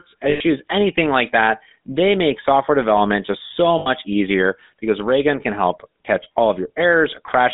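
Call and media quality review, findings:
GSM full-rate codec, whole clip: plainly audible buzzy, gravelly roughness on speech, band-limited 200 Hz to 3.7 kHz; spectrogram shows an empty band above 3.7 kHz. Pulse-excited vocal-tract model, consistent with 13 kbps GSM.

Lost GSM frames, 0.30–0.45 s (100 ms, before "anything like that") and 3.78–3.89 s (80 ms, between "software development just so" and "easier because"): rough metallic ring as last good frame repeats; spectrogram shows smeared, static bands in place of normal formant movement.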